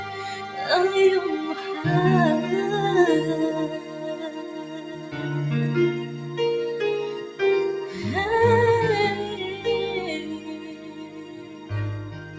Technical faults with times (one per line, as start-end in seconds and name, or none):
0.00-12.39 noise suppressor applied to music or sounds
3.78-5.15 sound cut by the noise suppressor
10.39-11.70 sound cut by the noise suppressor